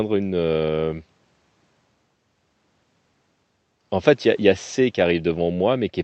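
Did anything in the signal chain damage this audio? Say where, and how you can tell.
No, nothing in the signal chain audibly damages this speech recording; it comes through with its level, timing and tonal balance intact.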